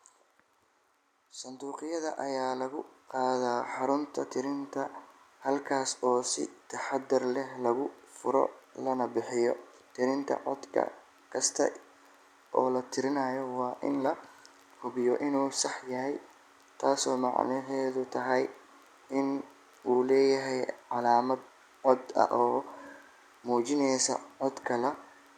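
A speech recording in which automatic gain rising occurs from 1.59 to 4.77 s: the level climbs steadily by about 10 dB over roughly three seconds as the gain control, judging the input too quiet, turns itself up. Because the background noise swells in step with the voice, this is not the talker speaking louder or moving toward the microphone, which would raise the voice alone.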